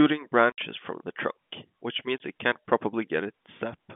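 At 0.52 s and 2.18 s, packet loss filled with silence cuts holes of 60 ms and 20 ms. Lost packets became silence, with hard edges.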